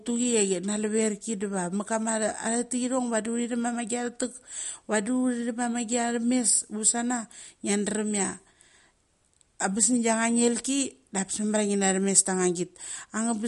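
Throughout the speech the sound is watery and swirly, with sibilants turning metallic and nothing above 11.2 kHz. That likely comes from MP3 compression at a low bitrate, which fits about 48 kbps: the encoder cuts the treble and drops weak frequency lines frame by frame.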